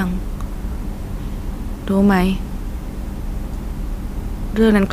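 No audible technical faults turn up anywhere in the speech.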